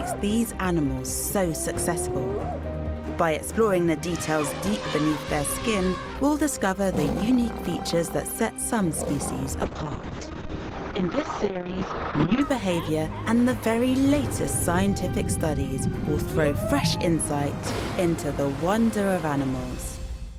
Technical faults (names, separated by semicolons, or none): call bitrate drop